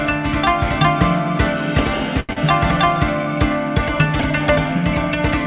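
At 2.20 to 2.31 s there is a short stall from a late packet. The jitter buffer ran dry, so the last sound is held for 88 ms, then resumes intact. Right after, at 2.33 to 2.38 s, short concealed packet loss follows. About 60 ms never arrived; 32 ms of extended sound covers it, heard as a brief smear with some audio gone, over a band that stops at 4 kHz, which fits a G.711 call codec.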